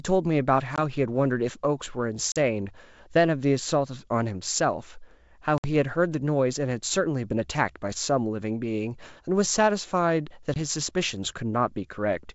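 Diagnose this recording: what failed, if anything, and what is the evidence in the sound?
Packet loss on an ADPCM call, at the network stage, at 0.76, 2.32, 5.58 and 10.54 s: hard-edged silent holes of 20, 40, 60 and 20 ms. The decoder's predictor and step size lose step with the sender's. Speech resumes slightly distorted, then settles.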